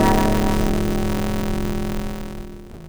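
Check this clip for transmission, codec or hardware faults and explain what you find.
There is a block size mismatch (truncated) running through the whole clip. One stage writes longer blocks than the next reads, which fits a 256-sample read, so each block's tail is discarded. The audio plays 1.88 times fast at roughly normal pitch, with a buzz at 188 Hz.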